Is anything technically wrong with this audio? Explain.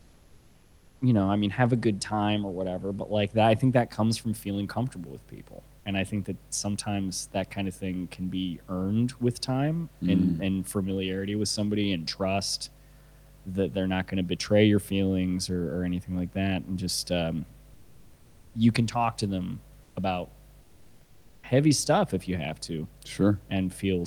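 Yes, two faults can be heard.

Mains hum runs through the whole clip: a steady 50 Hz tone sitting roughly 20 dB below the speech, loud enough to hear as a low drone under everything. A ground loop or nearby transformer is leaking the power line into the signal path. On a spectrogram it shows as a thin, unbroken horizontal line at 50 Hz, with fainter lines at low multiples stacked above it, and it never changes with the speech.

Comfort noise in place of the background appears three times: from 0.00 to 1.01 s, briefly from 19.83 to 19.95 s, and from 20.61 to 21.43 s. In these pauses the natural room noise, otherwise about 39 dB under the speech, disappears. It is replaced by a flat, featureless hiss about 3 dB quieter. The likely cause is discontinuous transmission in the codec. The sender stops sending audio when it detects no speech, and the receiver fills the gap with synthetic noise. 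A spectrogram shows these stretches as smooth, uniform texture with none of the background's fine detail. The waveform shows a small step down in the noise floor at each boundary.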